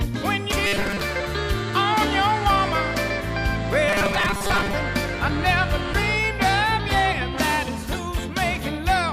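At 0.52 s there is a CD skip. The laser jumps to another turn of the disc's spiral, the output mutes for a few milliseconds, and then the sound resumes from a different point. It is heard as a tick followed by a jump. The waveform shows a tiny flat gap with mismatched edges. The same happens at 5.94 s.

From 0.67 to 1.02 s, and again from 3.88 to 4.74 s, the sound becomes a rigid, metallic buzz at 200 Hz. The likely cause is robotic sound from repeated short buffers. Audio arrives too late, so the last chunk is looped in its place. That pitch fits a 5 ms buffer. Most of the first span is repeated, and about half of the second. On a spectrogram the buzz shows as evenly spaced harmonic lines at multiples of 200 Hz. The waveform shows identical cycles repeating.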